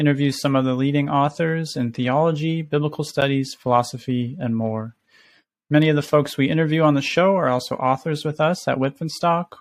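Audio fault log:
3.21 s, block of digital silence: Between "authors in theology biblical" and "philosophy and more", the speech drops to silence for about 9 ms. The output buffer was likely not filled in time, so that block came out as silence. There is no fade at either edge. The waveform jumps straight to silence and back. With a hole this short, it is heard as a tick or dip, not as silence.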